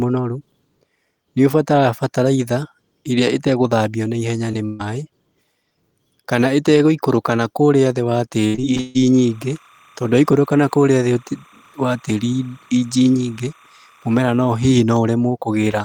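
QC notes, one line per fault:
4.51 s: short concealed packet loss, just after "ĩrĩa ĩtagũthambio na ihenya". About 20 ms of speech never arrived, and the receiver stretched the preceding sound over the hole before rejoining the real signal. It comes through as a tiny smear rather than a break, which sets it apart from the longer burst that follows.
4.65–4.81 s: burst of packet loss, after "ĩtagũthambio na ihenya ni". Roughly 140 ms went missing in one stretch, patched by prolonging the last sound and letting it fade. A held buzz or hiss replaces the syllables, and speech resumes further along with that span gone. This is one sustained gap, not scattered dropouts.
8.47–8.97 s: repeated packet loss (robotic sound), after "ĩtagũikũrũka nakũrĩa thĩ wa". Five separate gaps totalling about 260 ms, the longest about 141 ms, leave roughly half this half-second synthesized. Successive patches chop the speech into a robotic stutter, unlike a single burst's one smooth fade.
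9.15–14.70 s: timecode bleed. Linear timecode at 30 frames per second leaks in at about 30 dB below the speech, flipping between tones near 1 kHz and 2 kHz. The result is a steady chirping warble that persists under the speech instead of coming and going with it, marking it as interference rather than dropout.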